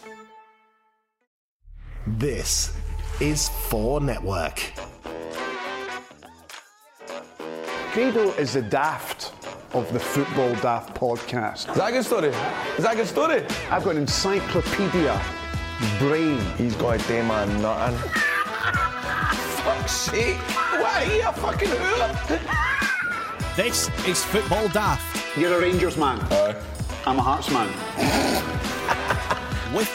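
Nothing in this recording stood out as a technical problem on listening.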